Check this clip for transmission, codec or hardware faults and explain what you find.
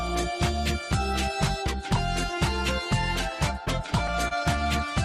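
One transmission fault stands out. Repeated stalls (stutter), 3.65–4.33 s: late packets drained the jitter buffer four times, each gap (longest 29 ms) filled by continuing the sound, so it drags. Spectrograms show brief smeared, repeated frames.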